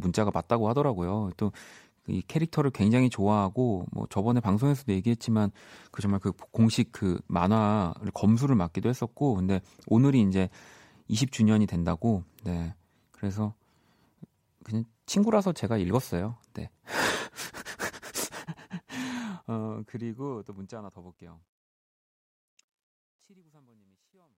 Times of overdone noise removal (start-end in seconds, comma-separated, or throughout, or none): none